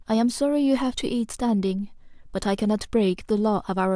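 No technical faults can be heard anywhere in the recording, with the signal holding steady throughout.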